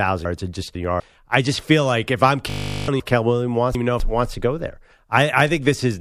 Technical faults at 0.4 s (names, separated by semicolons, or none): chunks out of order